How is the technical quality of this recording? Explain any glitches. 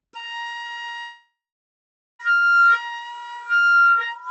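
The recording has one clear glitch: a long network dropout that interrupts the sound for just over a second, from 0.99 s to 2.21 s.

Long network dropout, 0.99 to 2.21 s: The likely cause is that the connection stopped delivering audio packets for about 1.2 s. The receiver tried to cover the gap by stretching the last sound it had into a fading buzz, and after that gave way, about 0.82 s of near-silence remains. The audio then resumes later in the clip, with that 1.2 s section simply missing. Throughout the clip, the Opus call path limits the audio to about 8 kHz.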